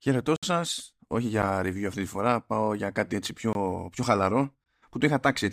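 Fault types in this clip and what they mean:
Block of digital silence: Zeros were played in place of the audio, so the speech cuts abruptly to dead silence and back: a 64 ms hole at 0.36 s, a tick at 1.42 s, and 21 ms gaps at 3.53 and 4.64 s, fitting a 1024-sample buffer.
Corrupt frame decoded: A compressed frame arrived with damaged bits and the decoder played it anyway, putting energy at the wrong frequencies for about one frame's length, heard as a brief chirp or blip breaking into the speech at 0.71 s.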